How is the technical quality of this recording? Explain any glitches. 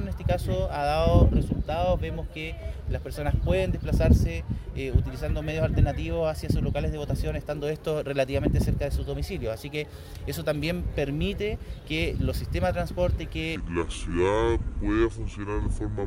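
The recording has one clear fault, in its final seconds. From 13.56 s to the end, a section at the wrong speed plays at 0.649 times its proper rate, likely from being clocked at the wrong rate. Everything drops roughly seven semitones and drags audibly. On a spectrogram, harmonics and formant bands step abruptly downward; the waveform's cycles visibly stretch out.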